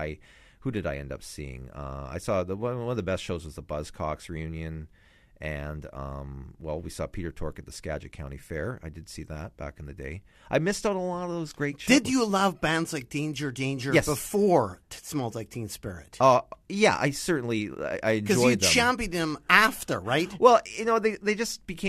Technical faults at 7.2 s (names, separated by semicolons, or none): none